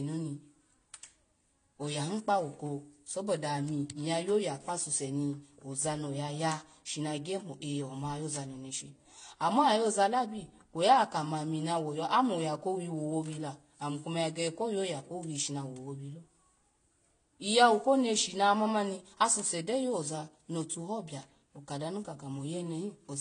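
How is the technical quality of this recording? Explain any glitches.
The quality is limited by a single fault that runs through the whole speech recording: transcoding between lossy codecs. From start to finish nothing is heard above about 9.8 kHz. The artefacts are also of two kinds at once. Two different sets of codec artefacts are heard together. That mix points to a Vorbis encode at around 46 kbit/s, likely followed by a re-encode to AAC-LC at about 32 kbit/s. The second encoder wasted its small bit budget on reproducing the first encoder's damage, then added its own. A single low-bitrate codec would leave one consistent artefact character, not these two distinct textures stacked together.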